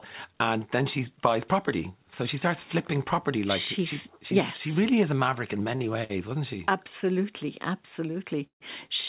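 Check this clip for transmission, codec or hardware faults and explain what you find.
Three timing faults turn up in this speech clip, all on a call path whose band stops at 4 kHz, consistent with a narrowband G.711-style codec.

Two short stalls from a late packet occur at 5.76 to 5.83 s and 6.04 to 6.12 s. In each, a packet missed its playout slot, the jitter buffer ran dry, and the receiver stretched the last sound, by 38 ms and then 55 ms, until the packet arrived. Nothing is lost; the sound is simply held too long, with a faint buzz or dip before the speech resumes.

A call audio freeze runs from 8.46 to 8.64 s. The sound is held for 142 ms: a brief continuation of the last sound, then about 120 ms of silence, before the speech picks up exactly where it stopped. The likely cause is packets held up in transit long enough to empty the jitter buffer, with the receiver's fill fading out during the wait. 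The speech arrives late rather than being lost.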